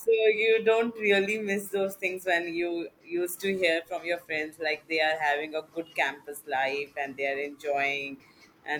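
At 3.69 s the speech goes through digital radio blending to analogue: the receiver loses its digital stream and crossfades over about 261 ms to the FM signal. Level drops about 2 dB, and faint hiss appears well below the speech until it blends back at 7.72 s.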